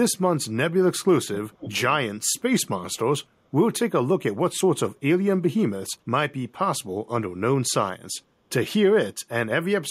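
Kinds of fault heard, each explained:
Echo leak: a faint copy of the speech trailing 0.48 s behind, 1.34 to 1.82 s, likely loudspeaker sound slipping past an echo canceller.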